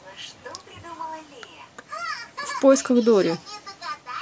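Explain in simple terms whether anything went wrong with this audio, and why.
Nothing went wrong with this speech recording, so there isn't any moment in it to point to as a problem.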